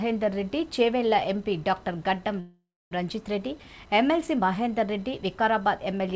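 At 2.40 s the sound stalls for about half a second, until 2.93 s. The last bit of audio carries on as a fading buzzy smear, then there's roughly a quarter second of silence before things pick up exactly where they left off, so nothing's lost; it's just pushed about 0.5 s later. That's a call audio freeze, likely from packets arriving late and the jitter buffer running dry. The G.722-style band limit, with nothing above 8 kHz, can be heard throughout.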